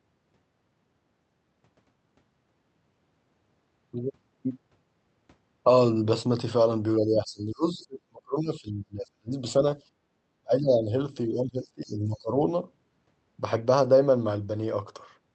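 From 6.99 to 9.42 s the speech sinks in pieces, losing its top end and at worst falling by roughly 35 dB over about two seconds. This is speech suppressed in double talk, likely because the echo canceller heard both ends at once and could not tell its own talker from the loudspeaker echo, so it pulled everything down. Unlike a simple level drop, the ducking is ragged and spectral rather than a smooth fade.

At 9.83 to 10.14 s the room background, not the speech, dips by about 11 dB for roughly 0.3 s and then returns. This is background gated by the echo canceller: it clamped the microphone while the loudspeaker played, so the ambience drops out briefly. The speech isn't being carved up here, which sets it apart from double-talk suppression.

From 10.42 to 10.91 s the speech is again pushed down by roughly 30 dB, and inside it, at 10.71 s, a faint scrap of the far end's voice slips through at roughly 25 dB below the speech. 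The same pairing returns between 11.26 and 12.35 s, where suppression reaches about 20 dB and short scraps of the other side's voice leak through at 11.61 s and 11.86 s, roughly 35 and 30 dB down. These leaks are likely uncancelled loudspeaker echo. They are brief fragments of a second voice, not a loss of the main one. Throughout, the call path audibly cuts off above 8 kHz, which fits Opus at around 48 kbps.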